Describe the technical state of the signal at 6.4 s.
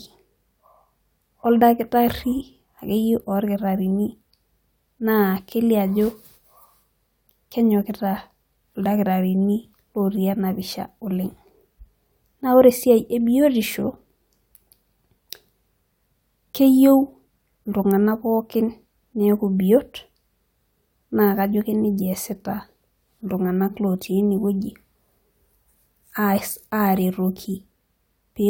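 At 6.4 s the speech signal is intact, with no audible fault at that point.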